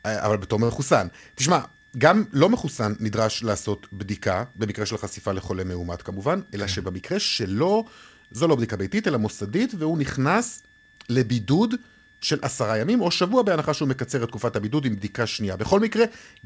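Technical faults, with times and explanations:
Throughout: switching supply whistle, a thin high tone between 1.69 and 1.78 kHz, about 35 dB below the signal. A switching power supply is running in an audible burst mode or beating with another one.
0.64–0.71 s: short stall from a late packet. A packet arrived late and the jitter buffer ran dry, so the receiver held the last sound for about 51 ms, leaving a brief stretched moment with a slight buzz or dip. Nothing is lost; playback resumes where it stopped.
6.44–7.51 s: jitter buffer speed-up. Excess audio had built up in the buffer, so the receiver trimmed many tiny pitch-period slices, about 70 ms in total, to cut the delay. The speech runs roughly 5% fast at unchanged pitch and sounds slightly hurried.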